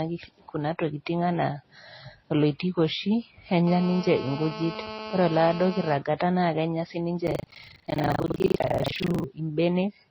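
From the start to the end, the speech sounds dull and smeared. The cause is likely transcoding between lossy codecs. A low-rate MP3 seems to have been re-encoded to AAC. Both sets of artefacts sit together, and the lowest cut-off remains.

From 3.67 to 5.97 s, a hard, raspy buzz appears. It is GSM phone buzz at about 217 Hz, rich in harmonics. A nearby 2G phone on a call pulses its transmitter. The audio circuit rectifies these bursts. The buzz holds steady, about 12 dB below the speech.

From 7.24 to 9.26 s, buffer tearing sets in. Writer and reader of the ring buffer have slipped. Roughly two fifths of each period replays audio from about 70 ms earlier. Hard joins bound it. A robotic rattle at 25 Hz follows the speech.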